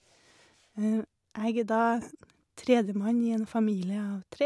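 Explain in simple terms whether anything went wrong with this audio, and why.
Nothing went wrong here: the speech recording comes through steady and intact, with no breaks, glitches or distortion at any point.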